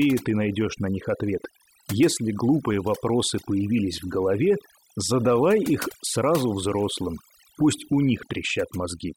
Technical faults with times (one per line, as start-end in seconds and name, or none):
0.00-9.17 overdone noise removal